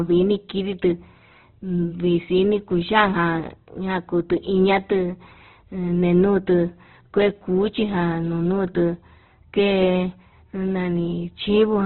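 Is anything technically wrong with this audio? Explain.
Yes. Heavy Opus compression runs through the whole clip. Nothing is heard above 4.1 kHz. The band energies survive, but missing detail is likely filled with folded or noise content at a low bitrate, near 12 kbps. The speech sounds rough, grainy and narrow.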